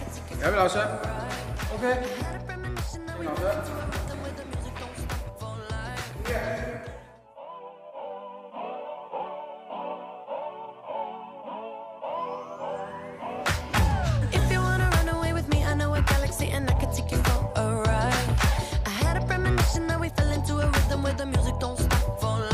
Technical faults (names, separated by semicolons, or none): none